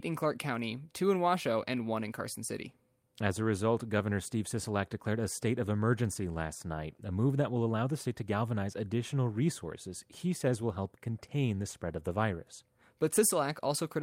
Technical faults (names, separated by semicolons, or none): none